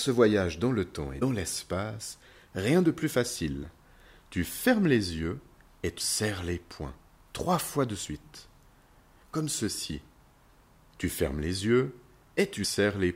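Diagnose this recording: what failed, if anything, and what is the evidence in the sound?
The codec stage failed, due to damaged data in a compressed stream. Brief chirps or blips at 1.21 s, 5.99 s and 12.63 s, each under 20 ms, mark spots where corrupted bytes made the decoder misread frames, lose sync and search for the next valid frame header.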